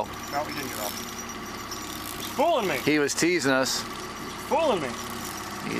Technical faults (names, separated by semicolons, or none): Bluetooth SBC bit pool drop